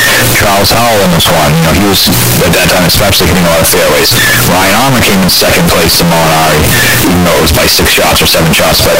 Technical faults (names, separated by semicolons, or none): float read as integer